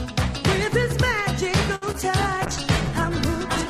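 At 1.75 s there's a short stall from a late packet. The jitter buffer ran dry, so the receiver held the last bit of sound for about 64 ms until 1.84 s, then picked up where it left off. Nothing's lost, but that moment drags with a faint buzz or dip, and everything after sits about 64 ms later.

Right after, from 1.92 to 1.95 s, comes a short concealed packet loss. Roughly 20 ms of audio never made it to the decoder. The receiver papered over the gap by extending what came before and blending back in, so you get a quick smear or wobble.

From 2.47 s to the end, there's a call bitrate drop. The bandwidth estimate collapsed, and the encoder went from 64 kbps down to 13 kbps for the last 1.2 s or so. That coarser coding sounds rougher and duller, with the top end trimmed.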